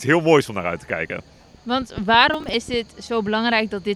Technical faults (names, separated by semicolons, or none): processor overload crackle